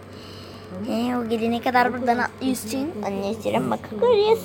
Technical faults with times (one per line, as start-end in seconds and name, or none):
0.00-2.57 Wi-Fi interference